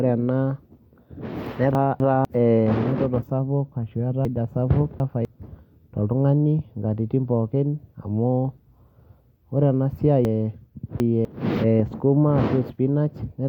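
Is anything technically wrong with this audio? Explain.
Yes. The speech has chunks out of order at 1.75–2.25 s, 4.25–5.25 s and 10.25–11.25 s. A 250 ms block arrives late, by one block in the first case and three in the others, and plays after its successors, so each spot sounds briefly jumbled, with hard joins.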